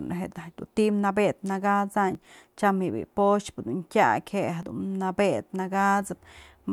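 Two brief skips, at 2.15 s just before "tyam bi'i" and at 4.63 s, each dropping about 20 ms: audio missing between chunks, likely lost at 2.5-second chunk boundaries.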